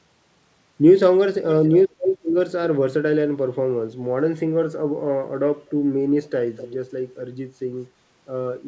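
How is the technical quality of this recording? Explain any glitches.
Three bursts of echo leak are audible in the speech, over a call path whose spectrum stops at 8 kHz, which fits 64 kbps G.722.

Echo leak occurs at 1.41–2.18 s, 5.66–5.70 s and 6.56–6.75 s. A copy of the speech returns about 0.25–0.27 s late, likely because a loudspeaker echo slipped past the far end's echo canceller. The first burst is roughly as loud as the speech, the second is barely there, and the third is about 15 dB down. On a spectrogram the harmonic stripes repeat, shifted right.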